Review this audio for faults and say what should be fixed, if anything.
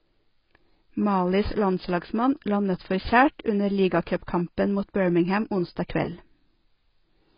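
Throughout, the speech sounds dull and smeared, with nothing above 5.1 kHz. This is likely heavy AAC compression, with a bitrate low enough to point to about 16 kbps AAC-LC. Encode at a higher bitrate or keep a lossless master.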